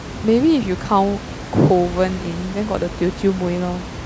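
No technical faults are present.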